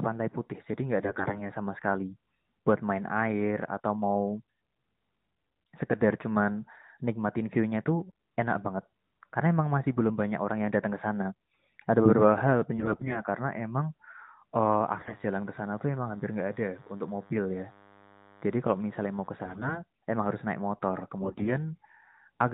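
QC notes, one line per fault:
1.00–1.49 s, 12.77–13.23 s, 14.98–15.15 s, 19.44–19.84 s and 21.22–21.53 s, AMR bit errors: the radio link corrupted the weakly protected bits of the AMR frames, at roughly 7 to 15 percent, while the protected core bits got through intact. The excitation pulses land in wrong positions, and the pitch, gain and spectral detail drift, so the narrowband speech keeps its rough pitch and level but turns hoarse, scratchy and gargly. It is harshest at 14.98 s, where the error rate was highest.
14.67–19.28 s, DECT cordless phone buzz: a nearby DECT handset or base emits a radio burst every 10 ms, and the audio circuitry rectifies it into the signal. The result is a thin, steady buzz at 100 Hz, rich in harmonics, sitting about 30 dB below the speech. It overlaps the burst of bit errors at 14.98 s.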